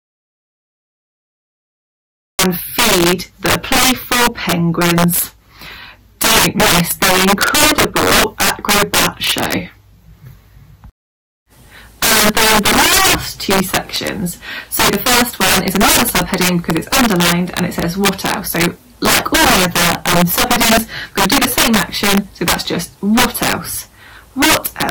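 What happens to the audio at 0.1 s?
Audio dropout to silence: at 0.1 s the clip is already in a gap of complete silence, running from the very start until 2.39 s. No room tone is left. The input was likely lost, and silence was written in its place.

Integer overflow affects the whole clip. The signal is driven about 18 dB past the integer limit, and peaks wrap to the opposite sign instead of being limited. That produces harsh cracks on loud passages, far sharper than clipping, once sound returns after 2.39 s. At 0.1 s itself there is nothing for it to act on.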